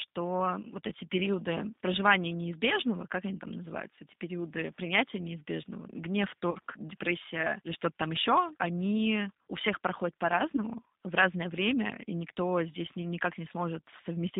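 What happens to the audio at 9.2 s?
At 9.2 s, as across the whole clip, the speech runs through a G.729 codec, consistent with an 8 kbit/s VoIP link. Each 10 ms frame is rebuilt from a vocal tract model and a few pulses within 150 Hz to 3.7 kHz, so it sounds narrow, rough and plainly synthetic.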